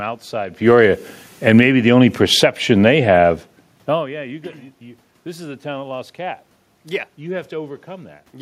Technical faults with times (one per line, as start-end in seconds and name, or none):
0.53-1.77 automatic gain falling
2.28-3.04 automatic gain falling